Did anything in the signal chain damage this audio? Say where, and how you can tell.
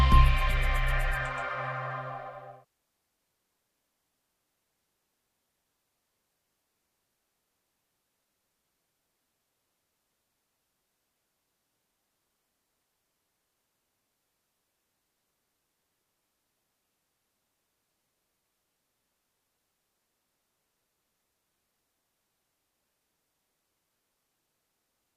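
No, no signal-chain damage detected.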